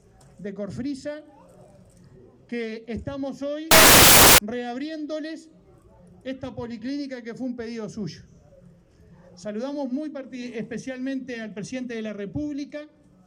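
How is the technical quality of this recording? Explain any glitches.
There is one glitch, from 3.71 to 4.38 s: samples built from the wrong bytes. For about 0.67 s the decoder misassembles each sample, so the rapidly varying low-order bits land in the high-order position. The sound is replaced by loud, harsh broadband noise, close to white on loud passages.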